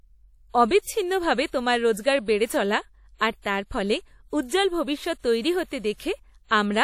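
Throughout the speech, the likely cause is WMA compression at a low rate, around 48 kbps by the sound of it. Long transform blocks smear quantisation noise in time, so the audio rings and turns washy, with hiss breathing alongside it and nothing above 16.9 kHz.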